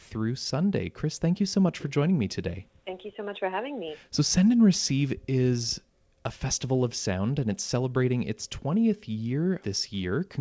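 Nothing's technically wrong with this bit of speech; it has come over a call link using the G.722 codec, so there's simply nothing above 8 kHz, which is just how that path sounds.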